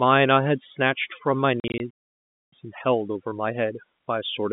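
A noise reduction stage set far too aggressively runs through the whole recording. Wherever a frequency band sits close to its noise estimate, it pushes that band down hard or removes it, and the quieter parts of the speech go along with it. The background collapses into near silence dotted with twinkling specks, across the telephone band of about 150 Hz to 3.6 kHz.

From 1.6 to 1.8 s, packet loss filled with silence breaks up the speech. Audio was lost in short pieces spread across that 0.2 s span, and the receiver played silence in each gap. The longest hole is 40 ms, and the spacing fits 20 ms packets. Each hole starts and stops abruptly, so the speech sounds chopped.

At 1.90 s the output goes completely silent for about 0.62 s, until 2.53 s. This is a playback stall, likely caused by the player running out of data or by its audio thread being blocked. The speech cuts off in mid-flow and stays silent for a noticeable stretch before it resumes.

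From 2.53 s to the end, a time-compressed catch-up follows. The player works off the backlog left by the stall by removing small slices of audio and cross-fading across the joins, which runs the speech at about 1.1 times its normal speed. The pitch stays normal, but the delivery sounds hurried.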